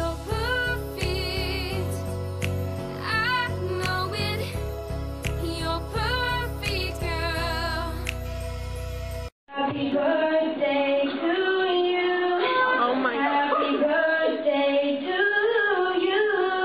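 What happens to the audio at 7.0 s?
Nothing goes wrong at 7.0 s; the audio plays through that moment intact, with no dropout, click or other fault to be heard.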